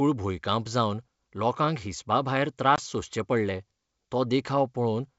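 From 2.76 to 2.81 s, just after "जावन लोकांक हिसबा भायर", the speech drops into a hard-edged silent hole of about 20 ms, and "सोंसचे पडले" returns briefly unsteady. This is packet loss on an ADPCM call: roughly one packet vanished, leaving the decoder's predictor and step size out of step with the sender's until they resynchronised.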